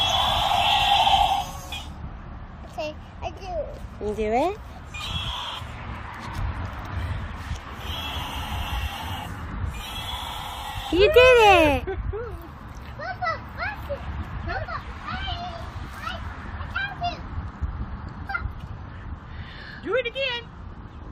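Nothing in the audio points to a technical fault. No dropout, distortion or other playback problem can be heard at any point.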